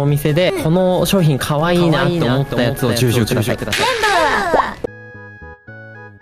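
Most likely a second, slower capture path or a misaligned edit mixed the audio in twice, producing a doubled audio track from 1.76 s to 4.86 s. A full-band copy a few decibels quieter trails about a third of a second behind, dry and uncoloured, appearing and vanishing abruptly.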